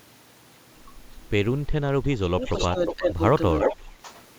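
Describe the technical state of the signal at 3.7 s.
At 3.7 s there's an echo leak running from about 3.59 to 3.89 s: a copy of the speech comes back roughly 359 ms late, at nearly the same level as the original. It's likely a speakerphone whose echo canceller let its own playback through.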